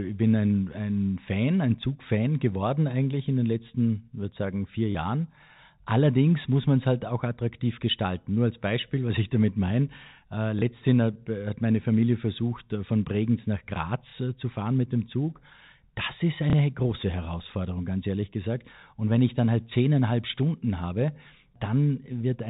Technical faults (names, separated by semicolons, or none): packet loss with last packet repeated